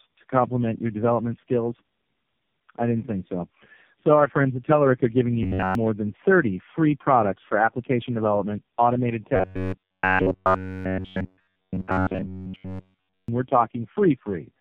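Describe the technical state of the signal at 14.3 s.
At 14.3 s the speech sounds rough, muffled and warbly, with nothing above about 3.5 kHz. This is tandem speech coding, present throughout the clip rather than at this moment alone. The signal passed through three low-rate narrowband speech coders in a row, with telephone-style links between them. Each coder had to re-encode the previous one's already degraded output, so the errors piled up. The result sounds like a chain of mobile coders near the bottom of their bitrate range.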